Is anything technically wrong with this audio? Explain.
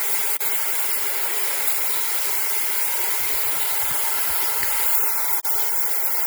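Yes. There is a gap at a join of encoded pieces at 0.37–0.41 s (37 ms) and again at 5.40–5.45 s (47 ms). Separately encoded segments were joined untrimmed, so encoder delay and final-frame padding leave short silences with smeared edges before the sound resumes where it stopped.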